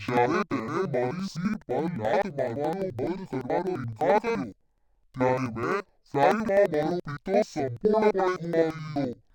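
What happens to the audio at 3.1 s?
At 3.1 s, as throughout the clip, the speech sounds an octave low, doubled and choppy, stuttering about 11.7 times a second. That is interleaved audio read as planar: each 85.33 ms block, which fits a 4096-sample block, is split in half and both halves play together at half speed.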